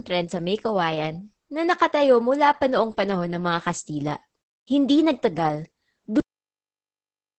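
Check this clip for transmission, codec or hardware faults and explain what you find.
Two faults are present: heavy Opus voice compression throughout, and a cut-off end.

Opus voice compression runs across the whole speech clip. The damage is heavy, consistent with the SILK linear-prediction coder at roughly 10 kbps, whose coarse excitation coding leaves the voice muffled, hoarse and slightly robotic. A spectrogram shows wideband content with nothing above 8.5 kHz.

The cut-off end comes at 6.20 s, where the audio stops mid-sound because the final buffers were never written. The waveform drops from signal straight to a flat line of digital silence with no decay, and that silence continues to the end.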